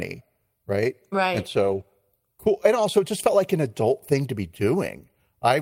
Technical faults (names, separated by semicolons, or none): lost packet rebuilt from error correction